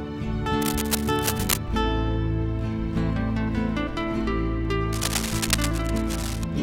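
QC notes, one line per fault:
0.62–1.58 s and 4.93–6.44 s, cable scratch noise: dense, irregular bursts of scratching and rustling sit only a few dB below the sound. The likely cause is a worn cable or connector being moved, with its contact resistance fluctuating rapidly.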